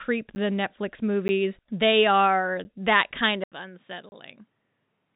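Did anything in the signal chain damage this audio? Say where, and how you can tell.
Yes. Driver or buffer stage: blocks of digital silence cut in at 0.35, 1.28 (just before "they are that kind"), 2.64 (between "they are" and "that kind") and 4.09 to 4.12 s, hard-edged holes, not fades, from unfilled output buffers.

Capture stage: after "they are that kind", the input was likely switched to a poorer device at 3.44 s. There is an 80 ms silence, then the level drops about 10 dB, with a new noise floor roughly 40 dB down. The change in tone and level, not bandwidth, marks it, since the G.711 path already stops near 3.8 kHz.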